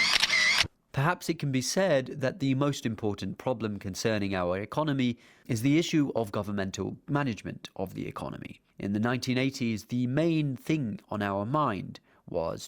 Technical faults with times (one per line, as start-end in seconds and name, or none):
none